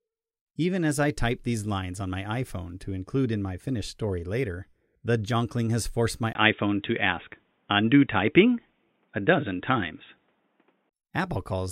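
Input switched to a poorer device, 6.33 to 10.91 s: the recording likely moved to a lower-grade microphone or headset. After a 20 ms gap, nothing above 3.8 kHz survives, so the speech turns dull and boxy, shifts level a few decibels, and gains faint new noise.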